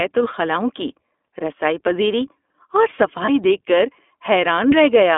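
Throughout, the speech carries the iLBC codec's narrowband sound: energy sits between about 250 Hz and 3.6 kHz, so a spectrogram shows a hard ceiling with nothing above. Each 20 ms frame is coded independently, giving plainly audible roughness and a synthetic edge, which fits the 15.2 kbps mode.

From 3.26 to 3.30 s, a lost iLBC frame leaves a 20 ms gap. The decoder fills it by repeating the last pitch cycle with added noise, producing a brief buzzy, held vowel. On the waveform this shows as a short run of near-identical periods before normal speech resumes almost immediately.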